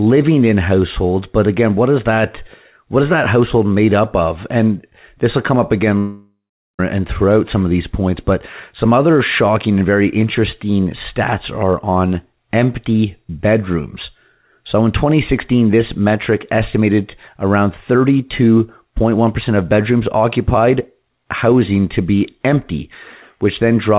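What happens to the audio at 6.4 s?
At 6.4 s the sound is in the middle of a gap running from 5.98 to 6.80 s, most likely a long network dropout. About 0.81 s of audio is missing. The receiver stretches the last sound into a fading buzz, then leaves about 0.42 s of near-silence before speech resumes with that stretch lost. A brief packet-loss glitch would be patched over in tens of milliseconds. This gap lasts long enough for the concealment to die out, and everything stays limited to 4 kHz by the G.711 call codec.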